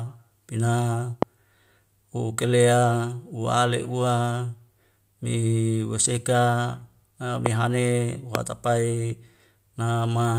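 Loud pops break into this speech clip at 1.22–1.25 s, 7.46–7.48 s and 8.35–8.37 s. Each is a single sharp click, about 20 dB above the surrounding speech, which carries on underneath without a gap. The likely cause is a brief voltage step or spike, such as static discharge, a switch or plug contact, or a driver glitch, entering the signal chain, where the following circuitry shapes it into a short, percussive transient.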